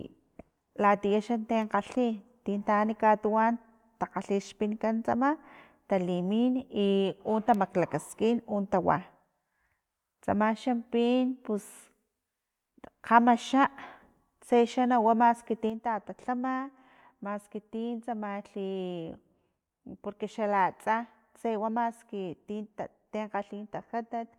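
At 15.70 s there's a sudden gain jump: the whole thing drops by about 6 dB in one step and stays down right through to the end of the clip. The speech and the background noise fall together, which tells you it's the digital level itself that changed rather than anything at the source. The likely cause is a gain setting or bit shift applied instantly, with no ramp to ease the change.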